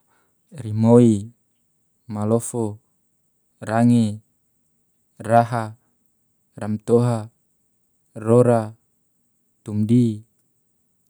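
The speech has no technical faults to describe.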